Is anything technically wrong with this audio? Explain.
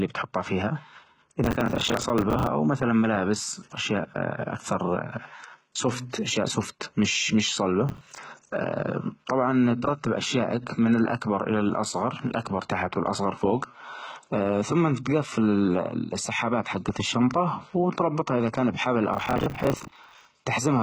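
Yes, two things. The whole clip has a heavily coded sound with nothing above 11.8 kHz, likely HE-AAC compression at a low rate, something like 16 kbps. The treble is rebuilt by copying lower bands upward, so the s sounds come out gritty and lispy rather than clean.

There's also processor overload crackle at 1.44 to 2.47 s, 7.89 to 8.18 s and 19.14 to 20.25 s. The system kept missing buffer deadlines, around 10 ms each, dozens in a row for the longer two, and filled the gaps with stale audio, so you hear a hard-edged, tearing crackle riding on the speech.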